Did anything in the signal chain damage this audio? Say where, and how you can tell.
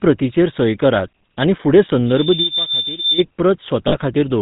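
Yes. Speech sounds buzzy and gravelly throughout, with nothing above 4 kHz. This is GSM full-rate codec damage at the codec stage, consistent with 13 kbps GSM. A pulse-driven vocal-tract model replaces the real excitation.

From 2.06 to 3.24 s a single 3.6 kHz tone swells over less than half a second to about 5 dB above the speech. This is loudspeaker feedback squeal in the acoustic playback loop, where the microphone picks up its own loudspeaker.

At 3.88 to 3.98 s the sound freezes into a brief metallic ring for 40 ms, which fits two lost GSM frames on the network. The decoder repeated the last good frame's settings.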